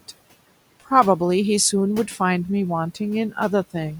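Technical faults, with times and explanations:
0.00 to 2.24 s, pre-emphasis left on: the treble stands about 8 dB higher at 10 kHz than at 1 kHz, which fits the CD 50/15 µs curve with no matching de-emphasis applied, so the speech sounds thin, bright and sibilant until the boost ends.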